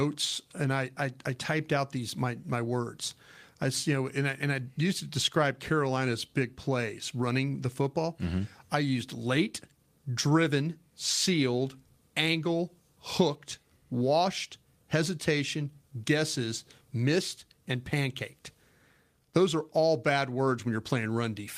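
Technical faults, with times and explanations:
Nothing stood out on listening through this speech recording.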